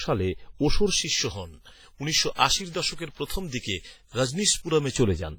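From the start, the speech carries a heavy washy, ringing quality, with hiss that swells and fades along with the signal. The likely cause is WMA compression at a low bitrate, around 24 kbps, where long transform blocks spread quantisation noise over tens of milliseconds and weak detail is discarded.

From 0.91 s, just after "সালে ওশোর", until 4.96 s, the sound turns thin, bright and sibilant, with treble lifted about 11 dB at 10 kHz relative to 1 kHz. This is pre-emphasis left on: a treble boost, consistent with a J.17 curve, was applied but never undone by the matching de-emphasis.

Two pre-echo events follow, from 3.25 to 3.30 s (48 ms) and from 3.60 to 3.63 s (32 ms). Each attack is preceded by a brief hiss and sounds smeared, because the codec spread noise sized for the loud onset across the quiet moment before it within the same block.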